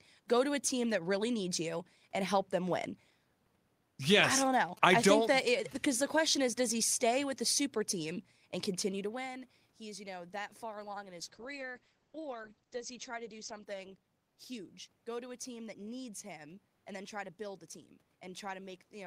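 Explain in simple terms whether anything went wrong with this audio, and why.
Two things went wrong. From 4.30 to 5.73 s there are GSM signalling bursts: a nearby 2G phone was chattering with its network, and the audio circuitry picked that up as a galloping dit-dit-dit of short buzzes layered faintly over the speech.

Then from 11.21 to 15.46 s comes a call bitrate drop. The connection decided it had less room, so the encoder squeezed the speech into far fewer bits, dropping the crisp top end. For about 1.4 s at its worst the speech turns rough and muffled. The background room noise and the level change around 9 s, where the talker shifts position, are ordinary.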